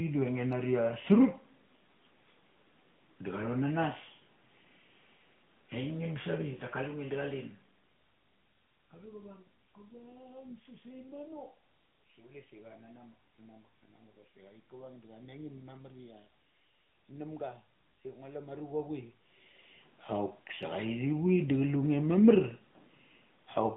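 The speech passed through the AMR narrowband mobile codec used on 2G and 3G phone networks, which resamples to 8 kHz and rebuilds the voice from a vocal-tract model excited by sparse pulses in 20 ms frames. Throughout, nothing is heard below about 150 Hz or above 3.6 kHz, and the plainly audible buzzy, synthetic edge on the voice points to a mid-range mode around 10 kbps.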